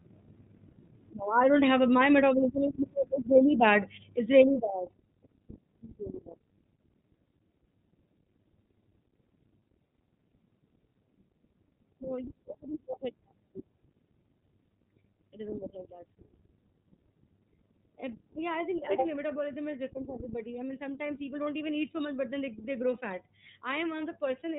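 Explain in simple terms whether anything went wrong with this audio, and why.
The speech sounds muffled and thin from start to finish, like an old phone line, with a slightly rough, synthetic edge that is plainly audible. This comes from the iLBC codec, a phone-call compression scheme that chops the sound into 30 ms slices and codes each slice on its own. It keeps nothing above about 3.8 kHz, which removes the crispness of the voice. There are no gradual rises and falls in loudness; the level stays steady throughout.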